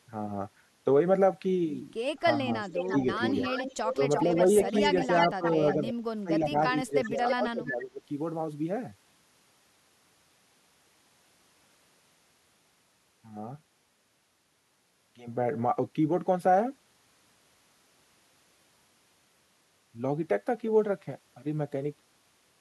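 Speech suppressed in double talk at 2.44–3.08, 3.96–4.31, 4.71–5.44 and 5.77–8.01 s makes this speech dip and drop out, slightly at first and then heavily near 6–8 s, likely from an echo canceller ducking both talkers. Echo leak at 2.7–5.92 s and 7.04–7.34 s brings back a delayed copy about 335–350 ms late and only somewhat quieter, likely residual loudspeaker echo a canceller failed to remove.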